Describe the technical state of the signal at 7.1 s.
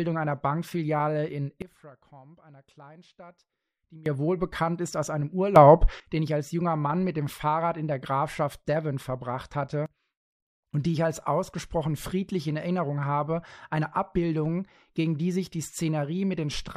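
At 7.1 s the speech signal is intact, with no audible fault at that point.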